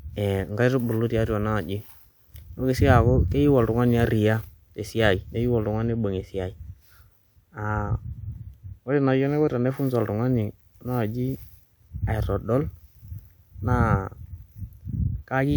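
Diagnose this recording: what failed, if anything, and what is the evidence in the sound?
Nothing in the speech points to a failure at any stage of the chain. There is no break, distortion or other defect to give as evidence.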